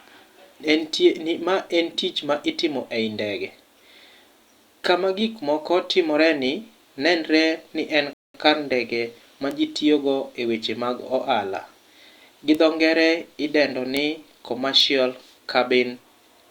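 The speech drops to silence from 8.13 to 8.34 s and then picks up exactly where it left off, adding about 0.21 s without losing any sound. This is a rebuffering stall: playback ran out of downloaded audio and waited for more data before continuing. Later, four sharp, broadband ticks unrelated to the speech occur at 9.51, 12.55, 13.97 and 14.80 s. These are bit error spikes, each a single flipped bit that throws a sample value up or down by a power of two and snaps straight back. The tick at 9.51 s fits two corrupted samples in a row, and each of the others fits a single sample.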